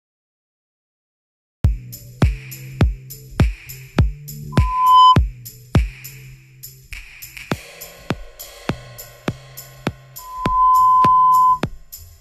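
The audio has a cut-off start: digital silence until 1.65 s, then the sound begins abruptly mid-event, with no natural attack. A loudspeaker feedback squeal appears twice, at 4.52 to 5.18 s and 10.18 to 11.62 s. A 1 kHz tone swells over roughly 0.5 s, then 0.4 s, to about 15 dB, then about 10 dB, above the sound. The microphone is picking up its own loudspeaker.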